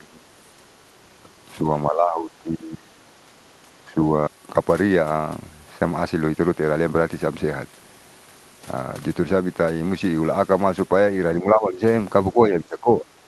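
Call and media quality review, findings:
Speech suppressed in double talk: level dips at 0.00–0.28 s, 0.57–0.63 s, 1.84–3.10 s, 3.27–3.33 s, 3.84–3.97 s, 11.40–11.82 s and 12.33–13.05 s. Deepest drops about 20 dB (first and third), about 10–15 dB elsewhere; 1.84–3.10 s affected over roughly a second. Likely echo canceller/suppressor attenuating near-end speech while far end talks, unable to separate the two.

Skip ahead at 4.28 s: abrupt forward jump with no gap or fill, about half a second of speech missing, the two sides spliced directly. Probable component: jitter buffer discarding queued audio on overflow to cut latency, dropping the playout delay by a similar amount in one step.

Jitter buffer speed-up: 4.36–5.19 s at 112% and 6.14–7.74 s at 111%. Speech sounds hurried at unchanged pitch. Receiver time-compression removes short pitch-period-sized pieces repeatedly, roughly a tenth of a second in the first stretch and a fifth in the second, to bring excess buffered delay back to target. 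Band limit near 12 kHz, consistent with Opus at a moderate bitrate.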